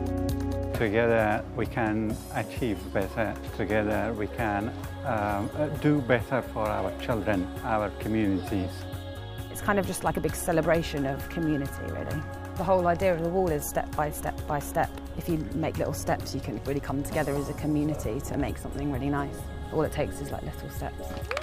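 Nothing here calls for comment, as there's no technical fault anywhere in the sound to point to.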